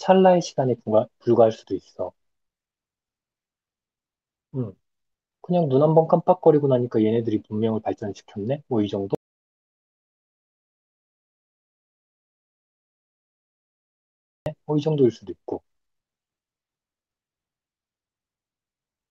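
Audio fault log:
9.15–14.46 s, audio dropout to silence: the speech cuts off mid-flow and returns about 5.3 s later, with the gap holding plain silence and no room tone, unlike a pause or gate. The likely cause is lost input while recording continued, so that stretch of speech is simply gone.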